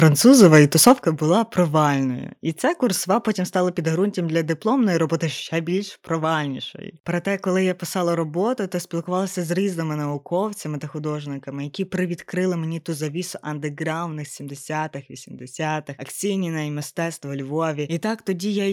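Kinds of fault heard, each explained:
Microphone overload: Twice near the start, from 0.27 to 0.6 s and again from 0.86 to 0.91 s, the loudest speech peaks turn harsh and crackly, pushing about 2 dB and then about 3 dB past the converter's limit. The likely cause is an input level set too high, so the converter flattens the peak tops. A waveform shows squared-off plateaus on a small share of samples, more in the second burst. A spectrogram shows broadband vertical smearing of added harmonics.
Microphone volume stepped down: At about 1.02 s, just after the second distorted burst, the whole signal, speech and background alike, drops suddenly by about 7 dB and stays there. This is likely the call software reacting to the overload by cutting the device's input volume in a single step. On a waveform the envelope narrows abruptly at that instant. A spectrogram shows every frequency band dimming at once, a clean vertical boundary rather than a gradual fade.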